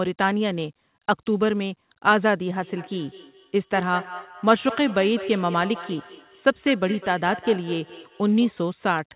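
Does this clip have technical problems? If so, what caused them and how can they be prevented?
Yes. Feedback echo between two devices runs from 2.56 to 8.62 s. The speech returns roughly every fifth of a second, peaking about 14 dB below it. One device's microphone recaptures another's playback, which no echo canceller removes. Keep only one device active per room.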